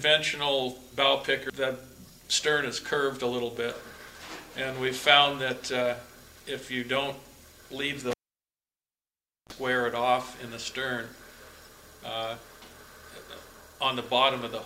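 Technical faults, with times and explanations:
8.11 to 9.53 s, cable pulled and plugged in: a live cable was pulled out and reinserted, giving a pop, then 1.37 s of near silence, a 33 ms burst of 60 Hz mains buzz while only the tip touched, and another pop as sound returns.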